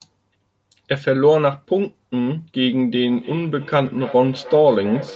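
A feedback echo between two devices, a second device replaying this speech into the microphone, makes it return about every third of a second from 2.95 s to the end, peaking about 18 dB below the speech, while the call's band limit leaves nothing above 8 kHz.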